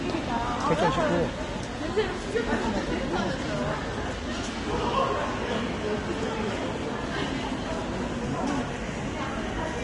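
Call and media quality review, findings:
Vorbis compression, whole clip: hissy, grainy treble, roughened tones, smeared attacks, nothing above 10.6 kHz. Likely a low-quality Vorbis encode, around 30 kbps by the sound of it, with fine high-frequency detail swapped for noise-like fill. Plainly audible.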